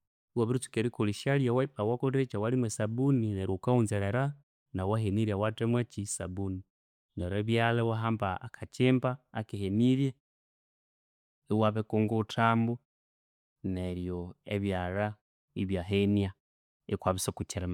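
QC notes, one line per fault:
Nothing in this speech clip stood out on listening.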